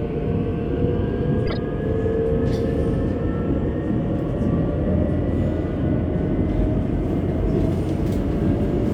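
A corrupt frame decoded from 1.46 to 1.57 s interrupts this recording of sounds with a fairly loud glitch. Damaged bits in a few compressed frames were still decoded, so misread gains and codes placed energy at wrong frequencies for about 0.11 s.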